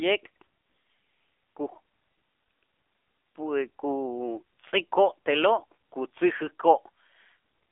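Throughout, the speech carries AMR narrowband mobile codec damage: a 300 to 3500 Hz line band, with plainly audible buzzy, synthetic coding that points to about 7.4 kbps.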